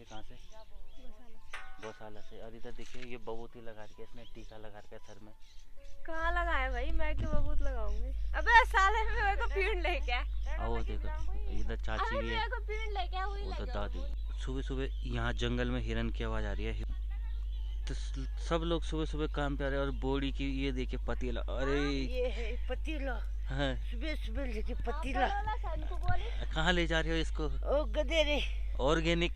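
From 6.2 s to the end, a steady low drone at 50 Hz sits under the sound, roughly as loud as the sound itself. This is mains hum: a ground loop or nearby transformer leaking the power-line frequency into the signal path.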